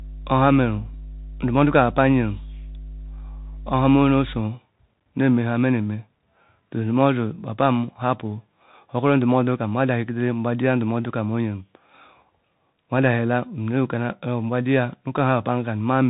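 From the first moment to 4.4 s, a steady 50 Hz mains hum sits under the speech at roughly 15 dB below it. This is power-line interference, most plausibly from a ground loop or a nearby transformer, leaking into the signal path. It sounds like a constant low drone, with some low harmonics, and it stops at 4.4 s.

For the whole clip the speech carries plainly audible damage from the Bluetooth CVSD headset codec. Nothing is present above 3.8 kHz, so the voice sounds narrow and telephone-like. The codec sends a single bit per sample to step the waveform up or down with an adaptive step size, which fits a 64 kbps link. Fast, loud high-frequency content outruns that step and distorts, so s sounds come out scratchy, with a grainy hiss underneath throughout.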